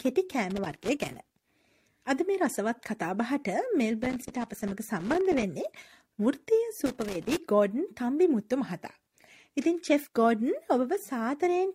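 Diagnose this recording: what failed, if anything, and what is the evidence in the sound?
Loose connector crackle at 0.50 to 1.17 s, 4.03 to 5.43 s and 6.86 to 7.37 s, in the analogue wiring. Each burst is irregular scratching as a worn or dirty contact rapidly makes and breaks, chopping the signal.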